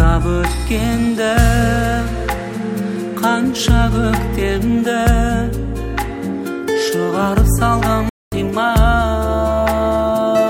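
At 8.09 s a playback stall silences everything for 0.23 s, likely a starved buffer; the waveform flatlines, leaving a blank spectrogram column.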